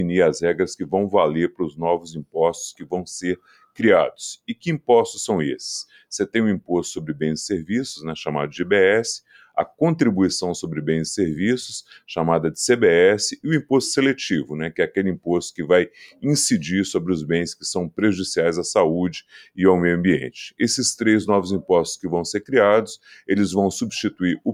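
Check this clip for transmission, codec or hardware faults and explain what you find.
The clip shows two related faults: a speech noise suppressor left active on non-speech audio, which also produces several sharp local dips.

Noise suppressor applied to music or sounds: throughout, a speech-tuned suppressor treats steady, sustained content as noise, so levels swing by around 5 dB and the sound pumps and thins.

Sound cut by the noise suppressor: at 1.5–1.8 s, 1.99–2.36 s, 2.75–2.92 s, 3.36–3.82 s and 4.48–4.89 s, the suppressor clamps held sound harder, dropping it by about 15 to 18 dB so it briefly sinks away.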